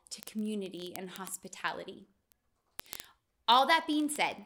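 Word clock ticks run from 0.12 to 4.45 s, about every 20 ms, some two hundred in all. The receiving device's clock is not locked to the sender's and drifts by roughly 0.1 percent, so at each slip one sample is dropped or repeated, producing a rapid, steady ticking through the speech.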